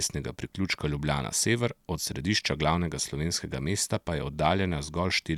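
No technical faults can be heard anywhere in the recording. At no point is the sound disturbed by a fault.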